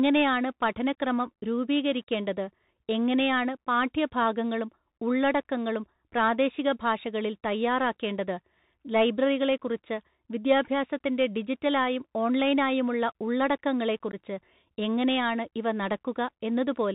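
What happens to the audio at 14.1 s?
A short, hard-edged hole opens in the speech from 14.12 to 14.15 s, about 15 ms of it lost: unconcealed Bluetooth headset packet loss, where a couple of voice packets dropped between headset and phone.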